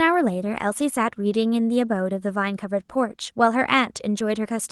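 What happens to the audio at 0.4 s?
Nothing goes wrong at 0.4 s: the speech passes through intact, carrying only the ordinary band-limited character of the Opus call path.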